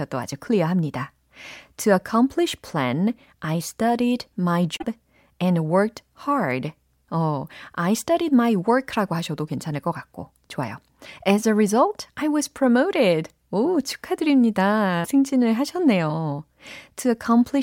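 At 4.74 to 4.84 s and again at 15.04 to 15.08 s, the speech is broken by damaged data in a compressed stream: corrupt bytes make the decoder misread frames and lose sync until it finds a valid header. Each is heard as a brief chirp, squawk, click or short hole, the first lasting about 95 ms and the second about 40 ms. On a spectrogram they show as abrupt broadband or tonal smears, and on the waveform as sudden bursts or gaps.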